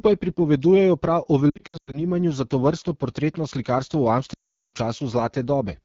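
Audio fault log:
throughout: AMR wideband (HD Voice) codec. The speech is plainly rough and raspy, with a hissy, synthetic top end. The codec models everything up to 6.4 kHz as pulses driving a vocal tract filter and fills 6.4 to 7 kHz with shaped noise. The damage heard here fits one of its two lowest modes, around 8.85 kbit/s, where too few bits remain to capture the voice's fine detail.
1.50 to 2.00 s: lost AMR speech frames. The sound stutters and warbles in several short breaks, the longest lasting about 100 ms, with about 260 ms missing in total across roughly 440 ms. It recovers just before "za tovrstno". Radio errors corrupted individual frames, so the decoder filled each gap by repeating the last good pitch and vocal tract settings at falling gain. Speech returns briefly weak and rough after each gap.
4.33 to 4.74 s: lost AMR speech frames. This is a single unbroken gap of about 400 ms. 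The sound drops to near silence within two frames, which is typical of wideband concealment running out of usable history. Speech comes back thin and rough for a moment after 4.74 s while the decoder rebuilds its state from fresh frames.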